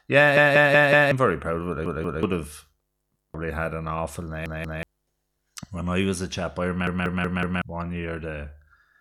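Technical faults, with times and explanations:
0.37 to 7.62 s, repeated buffer: stutters at 0.37–1.12, 1.86–2.23, 3.16–3.34, 4.46–4.83 and 6.87–7.62 s. Audio arrived late, so the device replayed the last 186 ms block one to four extra times with hard joins, which fits an 8192-sample buffer. Each repeat replaces fresh sound, losing up to roughly 0.7 s.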